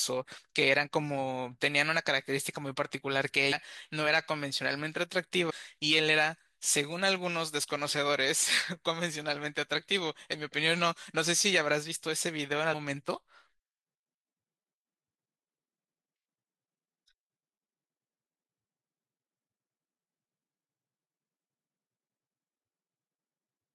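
At 3.52 s, 5.49 to 5.51 s and 12.72 s, compressed frames are skipped. The decoder loses whole frames, so the audio jumps ahead by about 150, 150 and 200 ms.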